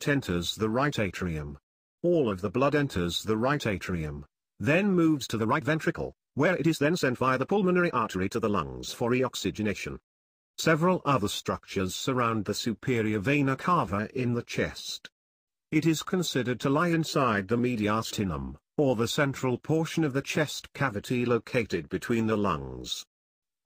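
From 5.14 s to 10.28 s the audio suddenly rushes ahead at about 1.4 times its normal pace, sounding hurried while its pitch stays exactly where it was, before the original pace returns abruptly. This is a time-stretched section, likely produced by software squeezing that stretch to fit a shorter length and holding the pitch steady by dropping short slices of the waveform.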